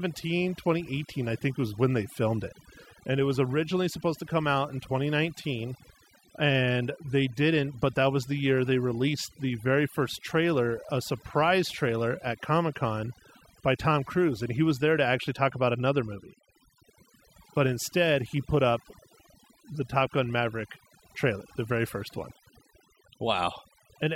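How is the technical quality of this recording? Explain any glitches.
Overdone noise removal affects the whole recording.

Throughout, aggressive noise reduction mutes frequency bands near its noise estimate, leaving twinkling specks in near-silent gaps, unlike steady hiss or band-limiting.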